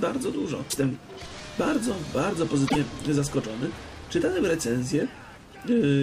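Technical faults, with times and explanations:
0.67–0.77 s and 2.65–2.76 s, damaged data in a compressed stream: each burst of about 0.1 s is a chirp, squawk, click or short hole where the decoder misreads corrupted frames and resynchronises.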